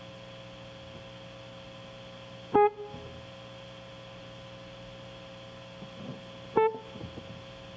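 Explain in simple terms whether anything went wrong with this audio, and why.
Something did go wrong: gain pumping runs through the whole music clip. The loud parts keep pulling the level down. The swing is modest. The music sounds squashed, with loud and soft moments pushed closer together. The likely cause is a microphone gain set far too high, so a fast limiter clamps down on every loud sound.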